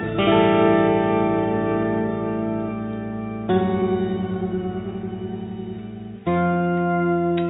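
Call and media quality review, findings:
No faults found: the music signal holds continuity throughout, with no audible dropouts, distortion or timing irregularities.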